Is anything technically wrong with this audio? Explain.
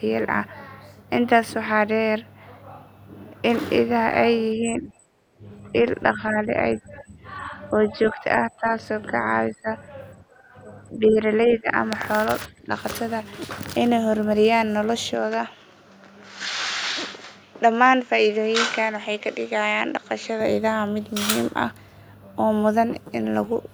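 Yes, there are three kinds of problem here.

Speech suppressed in double talk shows up as repeated dips in the voice at 4.56–4.89, 5.42–5.73, 6.13–9.13, 9.49–9.68, 10.65–11.24, 11.57–11.69 and 12.66–12.74 s. It's likely an echo canceller that couldn't separate the talker from far-end echo, so it turned everything down. The dips range from slight to fairly deep, around 20 dB at worst.

Background gated by the echo canceller shows up at 10.23–10.37 s, where the room sound drops by about 10 dB for a brief moment and then comes back. That's the canceller clamping the microphone while the loudspeaker was active and releasing it once playback stopped.

Input switched to a poorer device runs from 15.15 to 20.41 s. The sound suddenly goes duller, with a faint new noise floor well under the speech. There's no gap and no level jump, which likely points to a change to a narrower-band microphone or a headset call profile.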